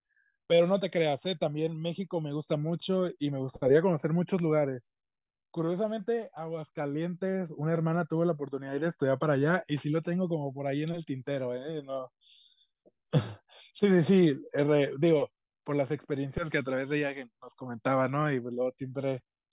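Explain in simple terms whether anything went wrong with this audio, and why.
Nothing went wrong with this audio, because no fault can be heard anywhere in the recording.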